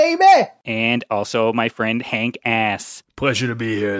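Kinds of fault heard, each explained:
Nothing stood out on listening to this speech.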